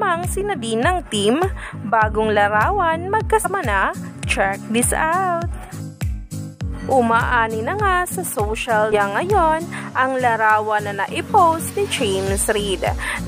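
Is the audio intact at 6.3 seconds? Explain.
Yes, the audio is intact at 6.3 s, with no dropout, click, distortion or other fault at that moment.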